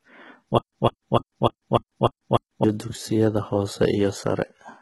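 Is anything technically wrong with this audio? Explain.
Yes, there are two faults. Throughout the speech, the sound shows HE-AAC compression damage. The treble is rebuilt from copied lower bands, not coded directly. Nothing reaches above 11.8 kHz. S sounds come out gritty and metallic. The damage is heavy, which points to a very low bitrate, around 16 kbps.

From 0.58 s to 2.64 s there is a stutter with silent gaps. A 155 ms fragment repeats seven times, each followed by 142 ms of digital silence. The cycle is even, every 298 ms. The likely cause is a stalled stream replaying its last buffer on each retry. The speech meant for that stretch is lost.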